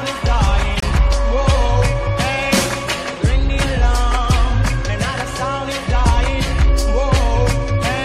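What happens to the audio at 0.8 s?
At 0.80 s the sound drops abruptly into silence for about 42 ms, resuming at 0.84 s with no shift in timing. This is a corrupt frame muted: flipped bits left one compressed frame undecodable, and the player filled that frame's slot with silence.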